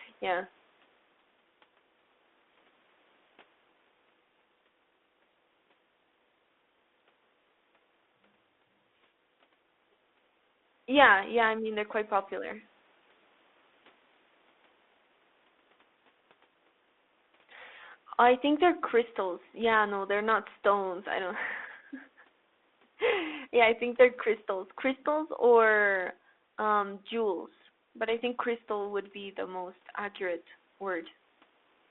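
No technical faults can be heard anywhere in the recording. The speech has passed through G.726 ADPCM at 32 kbit/s, which leaves it confined to a telephone band of roughly 250 Hz to 3.6 kHz with only light coding damage.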